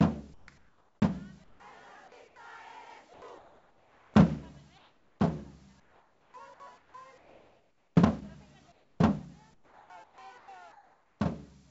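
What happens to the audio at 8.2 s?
At 8.2 s the sound is inside a stretch from 0.34 s to 11.2 s where the sender's voice detector, the likely cause, keeps switching transmission off and on, so this is sound chopped by the voice detector. Quieter portions are dropped and replaced with comfort noise, about 4.9 s of fill across the stretch. The result is choppy, all band-limited to about 7 kHz by the call codec.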